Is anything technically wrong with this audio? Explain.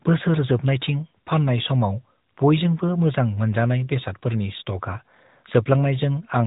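Yes. Throughout the whole clip, the speech has been through the AMR narrowband mobile codec, and the damage is plainly audible. Nothing above about 3.8 kHz survives. The codec samples at 8 kHz and rebuilds the voice from a vocal-tract model excited by a few pulses per short subframe. The result sounds muffled and telephone-like, with a buzzy, synthetic edge. That degree of coarseness fits a mid-rate mode of around 10 kbps.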